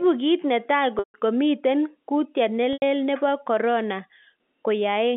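Packet loss with pitch repetition at 0.99 s (after "kit ne taa") and 2.73 s (after "miten kutiet"): 150 ms and 90 ms gaps are bridged by a repeated, fading pitch period that sounds buzzy and held.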